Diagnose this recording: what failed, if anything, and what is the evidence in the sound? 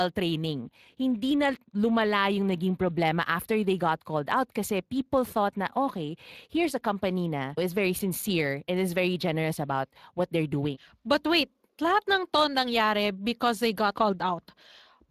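The failure is at the codec stage. The speech runs through a Speex codec for the whole clip, and the coding damage is plainly audible from start to finish. Nothing is heard above about 15.4 kHz. The damage sounds like what a bitrate near 22 kbps would give. Speex is a CELP coder. It models the speech with a predictive filter and codes the excitation that drives it. At this rate that excitation is coarsely coded, so the speech loses fine detail throughout.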